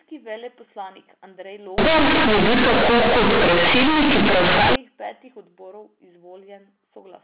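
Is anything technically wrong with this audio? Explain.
Yes. From 1.78 s to 4.76 s, companded audio is read as linear. A-law telephone bytes are played as plain 8-bit samples without expansion. Every sign change swings about half the range, so quiet parts become as loud as loud ones. It sounds harsh, loud and buzzy, with heavy noise in pauses.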